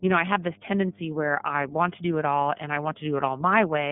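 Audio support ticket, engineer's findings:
Mains hum, whole clip. Steady 50 Hz drone under the speech, roughly 20 dB down, so you'll catch it in every pause. Probable component: ground loop or a transformer near the cabling leaking the power line into the signal path. Check the earthing before anything else.

iLBC codec damage, start to finish, plainly audible. Speech sits in a 150 Hz to 3.5 kHz line band, nothing above 3.7 kHz, and has that slightly rough, synthetic edge. Each 30 ms frame is coded on its own, which fits iLBC's 13.33 kbps mode. Probable component: the VoIP leg.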